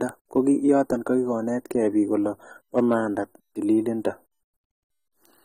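Throughout the speech, a lossy encoder has thrown away detail the hearing model judged expendable, most likely AAC compression, with plainly audible damage that fits a low bitrate near 24 kbps. Nothing survives above 16.5 kHz, and the bands left thin are filled coarsely, so the speech sounds dull and smeared, with a fizzy, warbling edge on sibilants and held sounds.

From 0.38 to 0.78 s, a stage in the chain receives more level than it can pass, about 1 dB too much, and hard clipping flattens the peaks. The squared-off tops add high harmonics, heard as a light crackle on the loudest moments. The overload returns harder, about 3 dB over, from 2.78 to 2.94 s, just after "biik kolee bo". More of each waveform is cut flat there.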